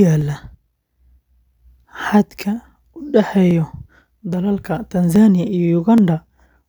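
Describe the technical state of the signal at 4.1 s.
At 4.1 s the speech sits within clock drift buffer slips running from 0.21 to 5.98 s. A click recurs every 0.83 s, about seven in all. Each click is likely a few tens of samples dropped or repeated as mismatched clocks drift the buffer. Unlike random dropouts, these clicks keep a strictly regular spacing.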